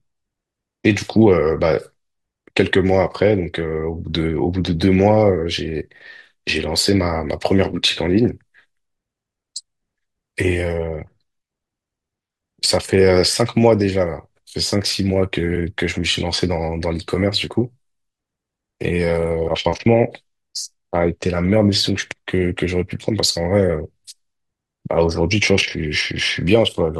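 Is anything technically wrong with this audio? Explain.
Yes, there's damaged data in a compressed stream, three times: at 7.72 s, at 15.55 s, and from 19.46 to 19.49 s. Corrupted bytes make the decoder misread frames and lose sync until it finds the next header, so each spot comes out as a brief chirp or blip in the speech.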